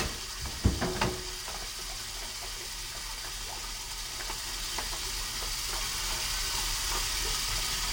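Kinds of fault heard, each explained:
stereo read as mono: The whole clip plays at half speed and a full octave low, 12 semitones down, with a fainter mirrored copy of the sound in the upper spectrum. Left and right samples were read in turn as one channel, stretching everything to twice its length.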